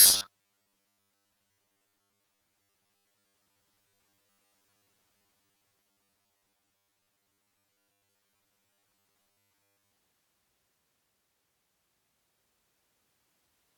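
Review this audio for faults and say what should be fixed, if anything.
From 0.01 to 9.97 s the speech has robotic sound from repeated short buffers: a rigid, metallic buzz at 100 Hz that still loosely follows the words. The likely cause is audio arriving too seldom, so the software loops a 10 ms stretch for most of that time while the real audio is skipped. Unlike a vocoder-style or pitch-shift effect, the buzz stays locked at one pitch however the voice moves. Prevent it by enlarging the jitter buffer or fixing the delivery that starves it.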